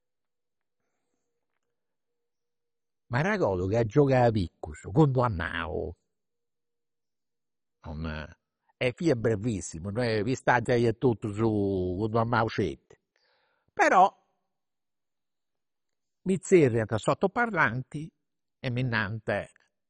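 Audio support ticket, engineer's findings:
Speech dull and gurgling throughout, granular hash. Likely MP2 compression at a very low rate, around 32 kbps: upper sub-bands switched off, survivors coarsely quantised. Spectrogram shows a hard ceiling at 10.3 kHz and blocky sub-band patches flickering on and off beneath it.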